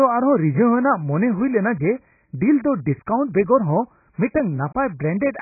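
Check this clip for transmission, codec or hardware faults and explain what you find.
The clip shows one fault, heavy AAC compression, audible throughout the speech. Nothing reaches above about 2.6 kHz, and the remaining band sounds dull, smeared and warbling, with sibilants turned fizzy. The likely cause is AAC-LC coding at a very low bitrate, around 12 kbps. The encoder runs short of bits, drops the cut-off low and quantises the remaining spectrum coarsely. A simple low-pass filter would sound clean below its cut-off, but here the surviving band itself is smeared and unstable.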